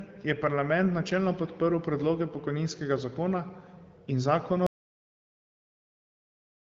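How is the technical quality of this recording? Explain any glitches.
The recording has one clear fault: an audio dropout to silence near the end. At 4.67 s the speech cuts off mid-flow, and the clip stays completely silent until it ends. No room tone or background hiss remains in that gap. The sound simply goes silent. The likely cause is that the input was lost, through a disconnected device, a failed link or a mute, while the recorder kept writing silence. Whatever was said after 4.67 s is gone. Before the cut, the speech has nothing above about 7.4 kHz, which fits the wideband HD Voice codec, and shows only light coding damage.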